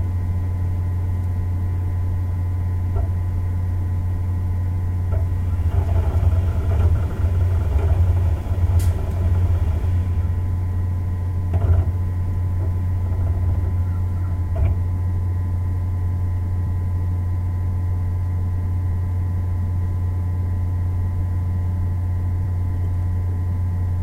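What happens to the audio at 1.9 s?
Nothing goes wrong at 1.9 s: the sounds carry on intact through that moment, with no dropout, click, distortion or other fault to be heard.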